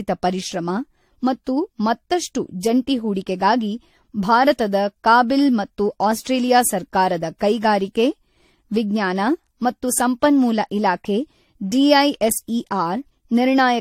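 From start to finish the speech carries generation loss. Consonant onsets are smeared, the sound has a swirling, hollow quality, and nothing is present above 16.5 kHz. The damage is heavier than a single encode would produce. The likely cause is repeated lossy re-encoding, around four passes of something resembling AAC-LC at about 64 kbit/s, with each pass requantising on a shifted frame grid so noise and spectral gaps accumulate.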